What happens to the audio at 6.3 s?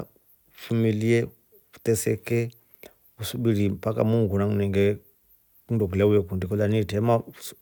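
Nothing goes wrong at 6.3 s; the speech carries on intact through that point, with no dropout, click or distortion.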